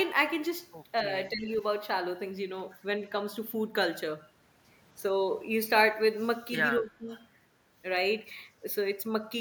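From 1.3 to 1.48 s, and again from 6.8 to 7.11 s, the speech dips sharply, by about 10 dB and then about 15 dB, for a fifth to a third of a second. This is likely speech suppressed in double talk: an echo canceller confusing near-end speech with far-end echo during overlap and attenuating both. Overlapping the end of the second dip, from 7.07 to 7.26 s, a faint copy of the speech arrives 268 ms late, roughly 25 dB down. That is likely echo leak, where loudspeaker sound reaching the microphone was not fully cancelled and was sent back.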